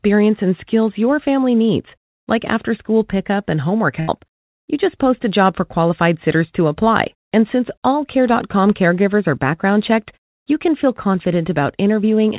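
At 4.0 s, just after "school pickup and homework", there is a burst of packet loss lasting until about 4.10 s. Several packets in a row never arrived in time. The receiver stretched the last bit of sound across the hole, fading it down for roughly 80 ms. You hear a brief held buzz or hiss that dies away. The speech then resumes slightly further on, with that stretch missing. The band stops at 4 kHz, which fits a narrowband G.711 call.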